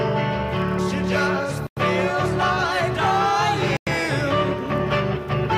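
Corrupt frame decoded at 0.78 s: a brief squeak where damaged compressed data was played anyway, with misread codes putting energy at the wrong frequencies. It sounds like a couple of frames' worth, and it peaks around -15 dBFS.

Gap between chunks at 1.67–1.77 s: a 100 ms hole where the audio, delivered in 2 s chunks, stops and restarts at a join. Nothing is lost, but the flow is cut.

Corrupt frame decoded again at 2.24–2.26 s, a similar blip peaking around -15 dBFS.

Gap between chunks at 3.77–3.87 s, another 100 ms silence at the next chunk boundary.

Corrupt frame decoded at 4.81 s, quieter, a chirp peaking around -25 dBFS from what sounds like a single bad frame.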